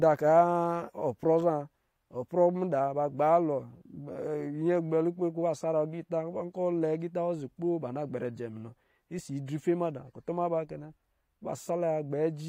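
Listening through the speech from beginning to end, nothing stood out as a technical fault.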